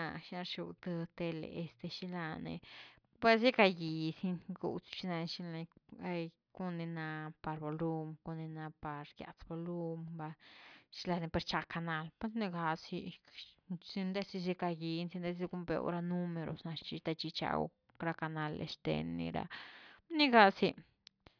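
Nothing goes wrong anywhere along the way here, with no technical faults turning up at any point in the recording.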